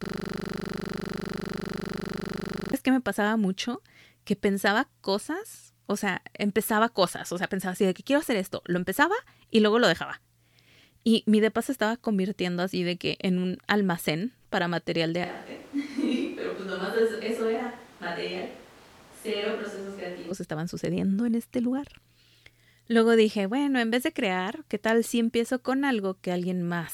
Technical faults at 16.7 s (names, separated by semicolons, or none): switch to a distant microphone